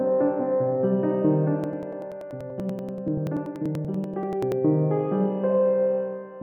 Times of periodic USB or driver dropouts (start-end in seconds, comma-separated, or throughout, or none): 1.64-4.52